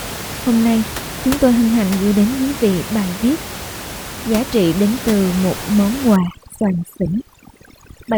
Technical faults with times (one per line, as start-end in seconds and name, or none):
6.16-8.18 overdone noise removal